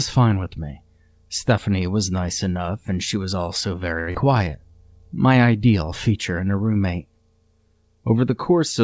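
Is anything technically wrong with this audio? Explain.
Yes. Three jitter-buffer faults cluster around 4 seconds of this call-path speech clip, which carries nothing above 8 kHz, consistent with G.722.

From 4.00 to 4.10 s, just after "and she was also", there is a short stall from a late packet. The packet missed its playout time and the buffer ran dry, so the receiver held the last sound for about 73 ms until the data arrived. Nothing is lost, but that sound is audibly drawn out.

From 4.11 to 4.17 s comes a skip ahead. With later audio already queued, a stretch of roughly 70 ms was dropped, and playback jumps forward. The two sides of the cut are spliced almost directly, so part of a sound is simply missing.

From 4.33 to 4.73 s is a jitter buffer slow-down. The buffer was low or had just raised its target delay, so it repeated individual pitch periods to rebuild its reserve, adding 59 ms. 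That stretch plays at about 87% speed at unchanged pitch, sounding dragged.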